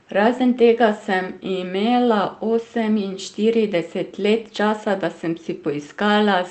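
Nothing stood out on listening to this speech recording, which comes through a WebRTC call path with the Opus codec.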